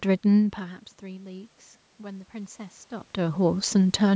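From 0.57 to 4.11 s, automatic gain rising adds about 5 dB after the input falls about 18 dB. Room noise swells along with the voice, which a talker moving wouldn't cause.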